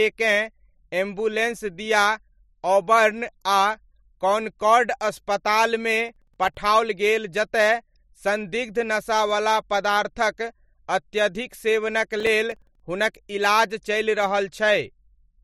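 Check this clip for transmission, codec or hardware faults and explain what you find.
The clip has two bursts of processor overload crackle, at 6.09–6.57 s and 12.20–12.80 s. The processor repeatedly missed its deadlines for buffers a few milliseconds long, so each late buffer became a brief silent gap. Together those gaps make a gritty crackle over the speech.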